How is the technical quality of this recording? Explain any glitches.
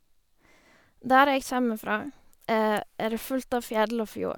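No glitches can be heard anywhere in the recording.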